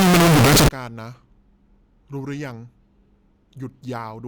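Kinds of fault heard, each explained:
Signed and unsigned mixed up: samples were likely read with the wrong sign convention, flipping the top bit, so speech from 0 to 0.68 s becomes loud, harsh distortion, with quiet moments as loud as the rest.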